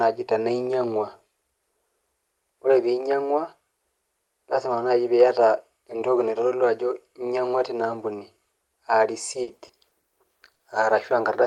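Between 9.43 and 10.05 s, packets were lost or arrived too late five times in quick succession. The receiver patched each hole, the longest 40 ms, by extending the preceding sound, so about 120 ms, roughly a fifth of that stretch, is filled in. The result is repeated packet loss that sounds choppy and robotic, with pieces of the speech missing.

Two short concealed packet losses then follow back to back, from 10.53 to 10.57 s and from 10.57 to 10.61 s. Each time about 20 ms of audio failed to reach the decoder. The gap was bridged from the last sound and blended back in, which is heard as a brief smear or wobble.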